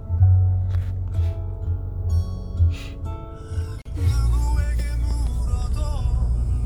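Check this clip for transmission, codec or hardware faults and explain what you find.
One fault turns up: a gap at a join of encoded pieces, from 3.82 to 3.85 s. The audio appears to have been encoded in separate segments, roughly 4 s long, and stitched together without trimming. Each segment's encoder start-up delay and final-frame padding were left in, so a silence of about 35 ms cuts into otherwise continuous sound. Its edges are smeared by the codec, and the sound resumes exactly where it broke off.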